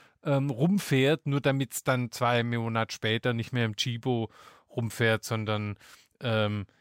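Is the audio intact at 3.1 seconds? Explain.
No. Throughout the clip, including at 3.1 s, a faint metallic shimmer rides on sibilants over a dulled top. This is imaging from linear upsampling: straight-line interpolation leaves a mirror image, roughly 30 dB down, between 11 and 22 kHz, which fits a 22 kHz source raised to 44.1 kHz.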